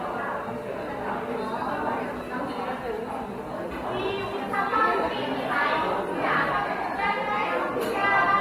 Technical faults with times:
6.50 damaged data in a compressed stream

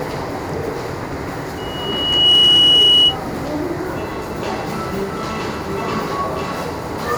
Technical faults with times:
1.57-3.17 loudspeaker feedback squeal

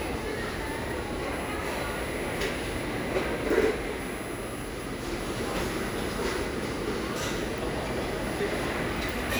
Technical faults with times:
0.00-9.40 USB whine

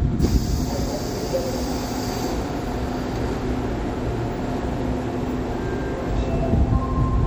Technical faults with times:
0.00-7.26 sample clock jitter
0.00-7.26 MP3 compression

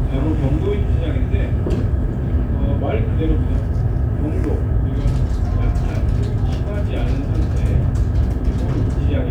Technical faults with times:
none

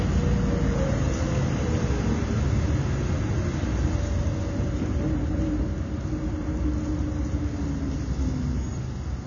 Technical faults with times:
0.00-9.26 AAC compression

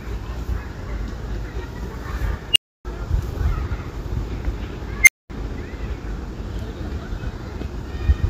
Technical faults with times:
2.52-2.85 unstable filter
5.03-5.30 unstable filter

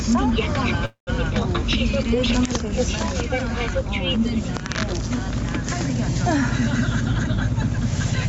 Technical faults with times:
0.00-8.29 gain pumping
0.85-1.10 call audio freeze
7.05-8.29 jitter buffer speed-up

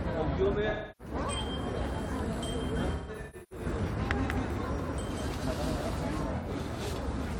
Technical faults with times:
0.69-1.14 AAC frame loss with concealment
2.76-6.24 doubled audio track
2.91-3.66 AAC frame loss with concealment
6.36-6.48 AAC frame loss with concealment

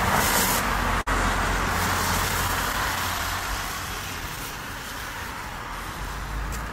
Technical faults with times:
0.00-6.73 clock drift between sender and receiver
1.01-1.08 short stall from a late packet
2.28-3.71 scattered short gaps
3.65-6.66 repeated timing corrections

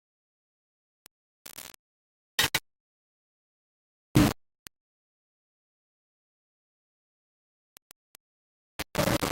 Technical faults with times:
0.00-9.32 low bit depth without dither

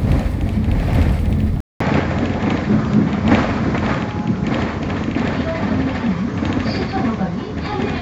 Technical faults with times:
1.60-8.02 input switched to a poorer device

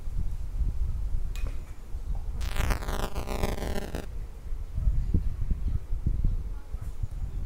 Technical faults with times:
2.40-4.05 buffer tearing

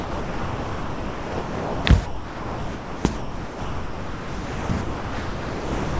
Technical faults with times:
0.00-5.99 sound dropped by the voice detector

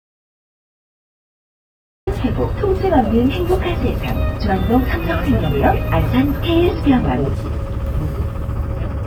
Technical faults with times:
0.00-2.07 audio dropout to silence

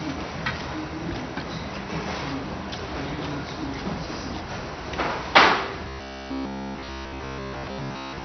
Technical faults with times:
0.00-8.24 MP2 compression
5.88-8.24 robotic sound from repeated short buffers

